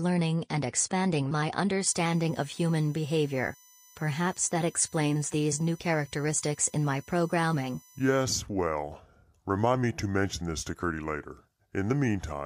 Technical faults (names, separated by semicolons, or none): USB whine